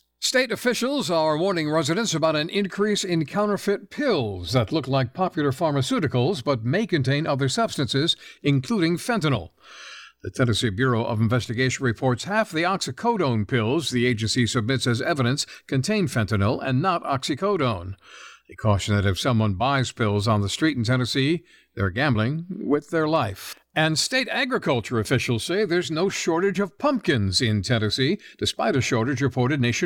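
Nothing stood out as a technical fault on listening to the speech.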